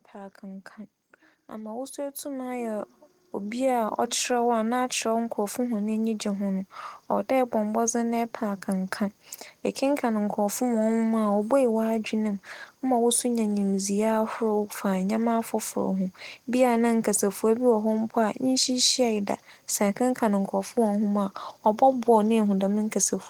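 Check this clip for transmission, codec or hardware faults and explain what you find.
One fault stands out, a case of automatic gain rising from 1.5 to 4.56 s. The gain control judged the input too quiet and stepped its gain up by about 11 dB over roughly three seconds, so the speech and the background noise swell louder together.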